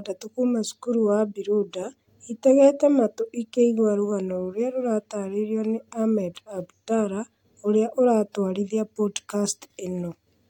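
No technical faults can be heard anywhere in the recording; the signal stays continuous and steady throughout.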